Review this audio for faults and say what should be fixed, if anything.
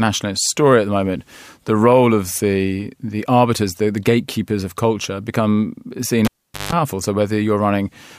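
At 6.25 s, right after "of culture become seen", the cable is pulled and plugged in: a pop, about 425 ms unplugged, including a 158 ms 50 Hz mains buzz, before it reseats at 6.72 s. Secure the connector before recording.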